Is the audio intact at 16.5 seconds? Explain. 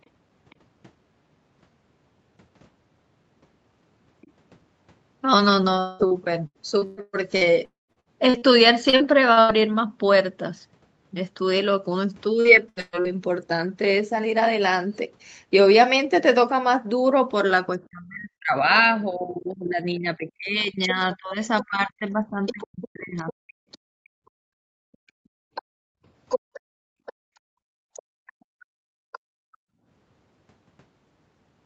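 Yes, the speech at 16.5 seconds is intact, with no fault at that moment.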